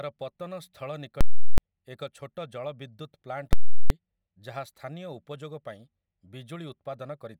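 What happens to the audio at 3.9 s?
A very loud pop marks the end of a stretch from 3.53 to 3.90 s that opened with a very loud pop and held no sound between. This is invalid numbers at full scale: a calculation produced infinite or invalid values that pinned the output to its limit for the whole 0.37 s block, which fits a 16384-sample block.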